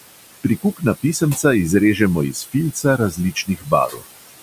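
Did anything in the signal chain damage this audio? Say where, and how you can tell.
Yes. In call processing, noise suppressor artifacts run throughout. The room noise, about 13 dB below the speech, is pulled down by about 20 dB between phrases and returns under them, because the per-band gain follows the estimated noise frame by frame.

Speech cut by the noise suppressor occurs at 1.02–1.44 s, 2.32–2.55 s, 2.73–3.72 s and 3.88–4.03 s. Soft speech parts drop by about 14 to 18 dB and sound swallowed, because the suppressor classed them as noise.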